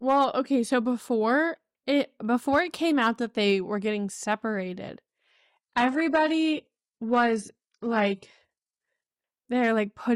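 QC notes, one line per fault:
5.08–9.08 s, adaptive stream at a lower bitrate: after "they were getting separated" quality drops suddenly, gaplessly, nothing above 11.1 kHz, which points to a fallback to a very low-bitrate HE-AAC rung.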